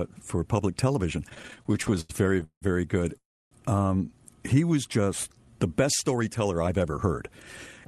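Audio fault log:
1.29–2.63 s, repeated stalls (stutter): The speech keeps catching and restarting, with about twenty brief holds across this 1.3-second stretch, the longest 180 ms. Packets were reaching the receiver late or too slowly, so its jitter buffer kept running dry and each time it stretched out the last sound to cover the wait. About 459 ms of filler, roughly a third of the span, is woven in. Nothing is lost, but the delivery drags and stumbles.
3.17–3.53 s, call audio freeze: The sound halts for about 340 ms. A short continuation of the last sound fades away, and roughly 290 ms of that is silence before the speech resumes exactly where it left off. This is likely a network hold-up that emptied the jitter buffer, so the receiver had nothing to play until packets arrived. No speech is dropped, but a gap of about 340 ms is inserted.
4.54–5.69 s, jitter buffer slow-down: Over these 1.16 seconds the speech runs at about 91% of its normal speed without any change in pitch, and sounds are drawn out. 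The receiver was rebuilding its reserve, so it repeated single pitch cycles and slivers of pauses many times in a row. That adds about 115 ms to the passage, which comes across as a slightly sluggish, elongated stretch.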